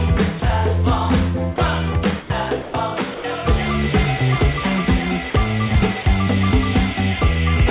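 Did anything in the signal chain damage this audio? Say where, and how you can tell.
Yes, at the call-processing stage. The sound briefly gives way to steady comfort noise at 0.40 s and 1.56 s, then at 2.62–2.74 s, 3.14–3.24 s, 5.30–5.34 s and 6.02–6.06 s, with the longest gaps running about 100–120 ms. That's sound dropped by the voice detector: the sender likely took those sounds for background and stopped sending, and the receiver filled in noise until the detector reopened. The band stopping at 4 kHz just comes from the narrowband call codec.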